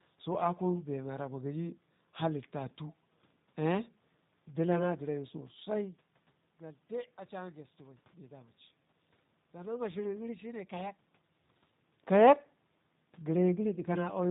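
From start to finish the speech carries plainly audible G.729 codec damage, a rough, slightly synthetic texture that fits an 8 kbit/s model-based coder. Unlike simple band-limiting, which only dulls the sound, it also makes the background room noise warble.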